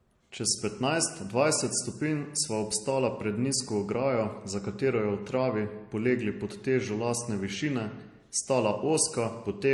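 Throughout the speech, from start to finish, the sound carries two different kinds of coding damage at once, which points to transcoding between lossy codecs, likely an MP3 encode at around 48 kbit/s later re-encoded as HE-AAC at a similar rate. The MP3 stage leaves a dull top end and watery smearing on consonants. The HE-AAC stage then adds its own synthetic, metallic high band on top. A single low-bitrate encode would show only one of these textures, not both layered together.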